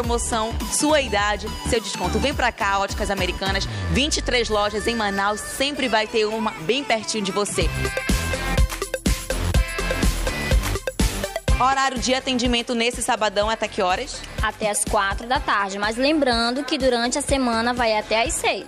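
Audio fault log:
9.05 s pre-echo: the codec kept long blocks, so quantisation noise leaked ahead of a sharp attack as a 10 ms hiss about 13 dB up, softening it.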